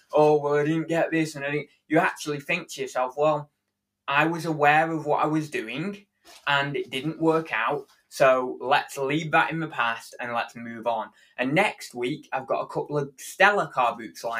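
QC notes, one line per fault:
1.64–1.91 s, 7.85–8.11 s, 11.1–11.38 s: sound cut by the noise suppressor. Each time the suppressor mistook wanted sound for noise and pulled it down by about 16, 16 and 14 dB, for roughly a fifth to a third of a second, leaving audible dips in level.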